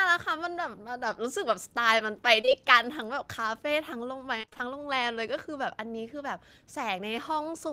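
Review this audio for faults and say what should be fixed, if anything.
A brief smear at 2.41 to 2.49 s is short concealed packet loss: two back-to-back 20 ms holes, each patched by extending the preceding sound before blending back. Prevent it with a larger jitter buffer or forward error correction on the link.

A choppy, robotic stretch from 4.41 to 4.61 s is repeated packet loss. A series of holes, the longest 24 ms, left about half of that span filled by continuation rather than real audio. Prevent it by fixing network congestion or enabling redundancy in the codec.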